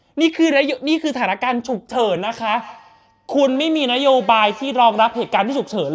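A speech clip with a feedback echo between two devices from 2.56 s to the end. Two devices share one call in the same room. One plays back what the other's microphone sent, and that microphone hears it again. Each echo canceller only removes its own playback, so the loop survives. The speech comes round roughly every 150 ms, thinner and more ringing each pass. The repeats peak at about 20 dB below the speech. The call's microphone processing leaves nothing above 8 kHz.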